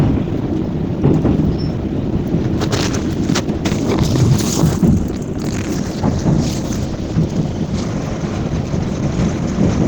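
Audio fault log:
Throughout, Opus compression: the sound is plainly hoarse and grainy, with rough, noisy texture where tones should be, likely from a low-rate Opus hybrid encode.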